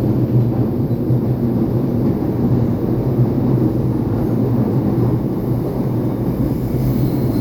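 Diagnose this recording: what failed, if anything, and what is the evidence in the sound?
Nothing failed; the everyday sounds carry no audible defect.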